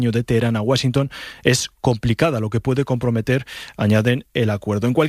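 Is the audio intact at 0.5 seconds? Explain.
Yes, the audio at 0.5 seconds is intact, with no dropout, click, distortion or other fault at that moment.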